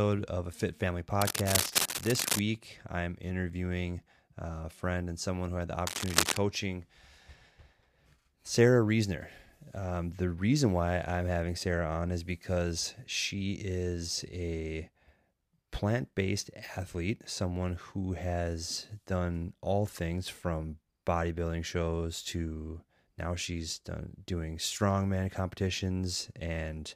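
From 1.21 to 2.40 s and again from 5.87 to 6.37 s, cable scratch noise rasps over the speech at roughly its level, likely a worn lead or connector being moved.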